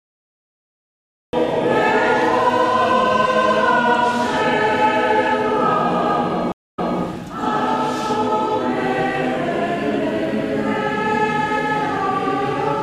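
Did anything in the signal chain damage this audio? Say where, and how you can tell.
Yes. Cut-off start at 1.33 s: recording began late, so digital silence runs from 0 s until the sound enters abruptly mid-event, without a natural attack.

Stream reconnect at 6.52–6.99 s, a network fault: after a 0.23 s dropout the player restarts its decoder and the audio resumes about 0.24 s earlier, repeating material.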